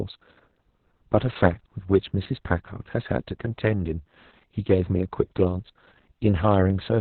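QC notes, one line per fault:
throughout: Opus voice compression. Nothing above about 4.2 kHz, so the speech is confined to a narrowband channel and sounds muffled and thin. The SILK linear-prediction coder is running alone, and its heavily coarsened excitation leaves the voice hoarse, buzzy and slightly robotic. The narrow band and damage this severe point to a bitrate around 6 kbps, with long coding frames of roughly 60 ms.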